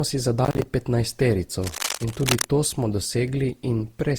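Throughout the speech there is a swirling, hollow smearing, with consonant attacks blurred and a watery texture beyond what a single encode would leave. This is generation loss, most likely from around ten successive Opus passes, which fits a 64 kbit/s chain. Each re-encode quantises on a shifted frame grid, so errors accumulate. On a spectrogram, upper bands look patchy and hole-ridden, with energy flickering in blocks, and transient onsets appear smeared rather than sharp vertical lines.

From 0.45 to 0.7 s a burst of gritty crackle tears through the sound. This is processor overload crackle: the processor missed deadlines for roughly ten buffers of around 10 ms each, and each missed buffer was filled with silence. The result is a rapid train of hard-edged dropouts. The waveform shows the signal chopped into short segments with abrupt silent gaps. The spectrogram shows thin broadband vertical streaks at each edge.

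From 1.57 to 2.45 s, ending just before "to smo", dense, uneven scratching and rustling sits over the speech at roughly 5 dB below it. This is cable scratch noise, likely caused by a worn cable or connector whose contact resistance fluctuated as it moved. On a spectrogram it appears as irregular broadband noise clusters smeared across the frequency range. The waveform shows ragged, spiky bursts riding on top of the speech envelope.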